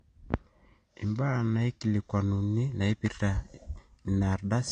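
Low-bitrate audio saved at a high bitrate runs through this speech: nothing sounds above 9.6 kHz, likely a cut-off from an earlier low-bitrate encode that the MP3 cannot restore.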